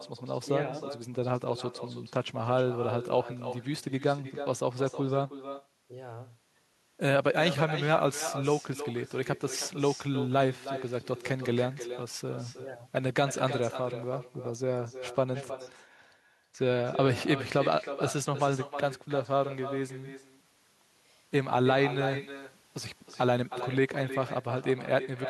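Echo with no canceller runs throughout: the far end's loudspeaker feeds its microphone, returning every phrase roughly a third of a second later, about 11 dB quieter and thinner.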